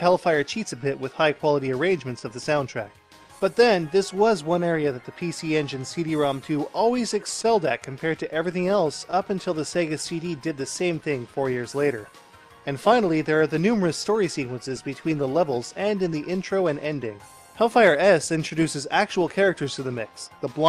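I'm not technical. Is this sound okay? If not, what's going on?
No. The sound has a slight, uneven drag all the way through, as if it keeps catching for a split second and then carrying on. That unsteady feel comes from clock drift between sender and receiver. The device that sent the audio keeps time a little slower than the one playing it back, by roughly 1.5 percent. Because the two never quite agree, the playback side keeps running short of sound and has to make up the difference.

The way it makes up that difference is through repeated timing corrections, which run from about 0.12 s to 20.54 s. The receiver keeps repeating tiny pieces of sound so it doesn't run dry. Altogether this adds roughly a third of a second and plays the audio at about 99 percent of normal speed. Each repeat is small, so it comes across as a faint hiccup or a wobbly tempo rather than a clear glitch.

There are also scattered short gaps, heard as brief ticks or smears. 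About four of them fall between 2.19 s and 4.62 s, and about three between 7.42 s and 9.15 s. Each is a tiny hole where a bit of audio arrived too late or went missing. The player patched it by briefly stretching the sound just before it, which is why you hear a quick blur instead of silence.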